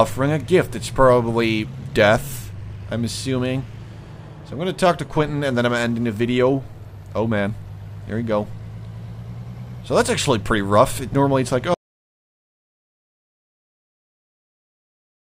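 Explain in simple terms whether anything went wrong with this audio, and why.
At 11.74 s the sound cuts off into dead, total silence until the end: an audio dropout to silence, likely from a lost input while recording continued.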